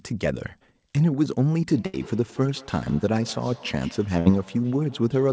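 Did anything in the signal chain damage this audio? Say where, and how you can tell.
Yes. From 1.69 s to the end there is feedback echo between two devices, an acoustic loop at the call stage. Each phrase returns at an interval of roughly 150 ms, at about 22 dB below the speech at its loudest, growing thinner and more ringing with each pass. Room reverberation would be a smooth decay. These are distinct, evenly spaced repeats, because a second device's speaker feeds its sound back into the microphone outside the reach of its echo canceller.

A burst of packet loss on the network occurs twice. At 1.86 s a held, fading continuation of the preceding sound fills 75 ms, and the audio then resumes about 80 ms further on. At 4.19 s a 64 ms fill is followed by a jump of about 60 ms. A plain dropout would fall to silence. This is concealment, which extrapolates the last sound and fades it before resuming with material missing.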